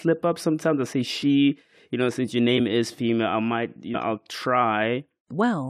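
A speech recording with compressed frames skipped at three points: 1.22 s, 2.57–2.60 s and 3.91–3.97 s. Each time the speech jumps forward, losing roughly 20 ms, 50 ms and then about a tenth of a second. Whole coded frames never reached playback. Unlike a dropout, there is no silent gap.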